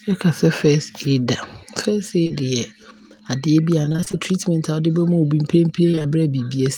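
At 2.23 s and again right after at 2.27 s there's short concealed packet loss: two back-to-back 20 ms holes, each fitting a single missing packet, patched by stretching the last bit of sound forward, so you get a quick smear around 2.23 to 2.32 s.

From 3.82 to 4.15 s, and again from 5.91 to 6.14 s, it's repeated packet loss, the robotic sound kind. Gaps of about 20 ms keep arriving, and nearly half of each stretch is concealment, so the speech turns choppy with pieces dropping out.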